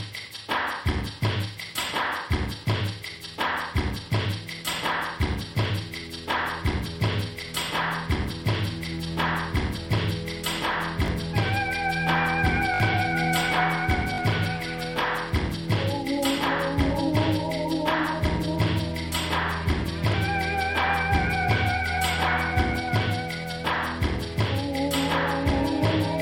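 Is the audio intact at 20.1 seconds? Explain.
No. A repeated buffer occurs from 20.12 to 20.14 s: when fresh audio arrived late, the last 20 ms block played once more, costing about 20 ms of sound. It's a brief click-like stutter, visible as a duplicated waveform segment with hard vertical seams.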